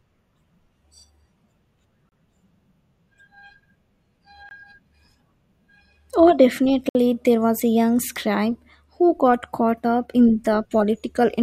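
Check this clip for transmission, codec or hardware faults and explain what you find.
Three blocks of digital silence break the speech: a 30 ms hole at 2.09 s, 20 ms at 4.49 s, and 60 ms at 6.89 s, just before "there was a young". Each is a hard dropout, likely where the output buffer wasn't filled in time and was zeroed.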